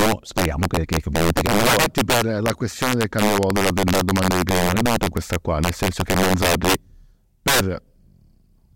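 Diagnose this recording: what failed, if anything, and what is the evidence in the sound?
The failure is integer overflow at the sample-format conversion or an integer gain stage, present across the whole speech clip. The signal is driven about 8 dB past full scale, and instead of clipping, the loudest peaks wrap around to the opposite extreme. Only a few percent of samples exceed the limit, so the damage lands on the louder syllables as harsh, violent cracks, far sharper than ordinary clipping distortion, while quieter passages pass through intact.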